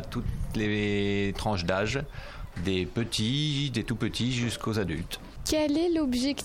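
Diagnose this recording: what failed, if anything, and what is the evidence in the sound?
Nothing failed, and there is no evidence in the sound of any fault in the recording.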